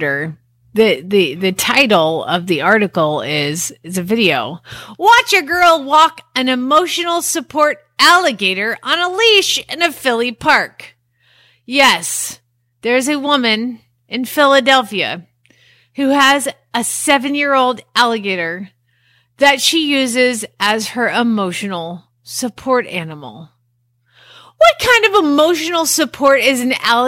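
Hard clipping runs through the whole of this speech recording. The signal was driven about 4 dB past what the converter or processing stage could pass, so the tallest peaks, well under one percent of samples, are sliced off flat. On a waveform those peaks show as squared-off plateaus; a spectrogram shows brief vertical smears of high harmonics at each one. It sounds like small crackles riding the loudest syllables.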